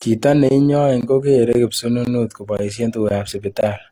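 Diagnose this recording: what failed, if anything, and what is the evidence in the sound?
Gap between chunks at 0.49, 1.01, 1.53, 2.05, 2.57, 3.09 and 3.61 s, each lasting 20 ms. This is a playback or storage stage fault. The speech drops into a short hole at each of these points, then resumes with nothing missing. Each hole follows 0.5 s of audio, so the chunks were delivered intact but a 20 ms silence was inserted at every join. That fits padding or a player starting each chunk late.

Transcoding between lossy codecs, throughout, at the codec stage. The whole clip carries two different flavours of coding artefact at once, and nothing is present above about 20.1 kHz. The likely cause is HE-AAC at 32 kbit/s followed by Opus at 48 kbit/s. The second encoder spends bits re-encoding the first one's smearing and adds its own distortion on top, so the damage from both layers is heard together.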